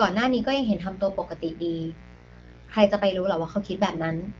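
A steady, raspy mains buzz sits under the speech the whole way through, about 20 dB down. Switching spikes on the 60 Hz supply are spraying harmonics well up into the kilohertz range. From 2.13 to 2.76 s you get AMR bit errors: flipped low-priority bits throw the excitation pulses and fine parameters off, so the speech turns hoarse and gargly. The same thing hits harder but briefly from 3.91 to 4.01 s.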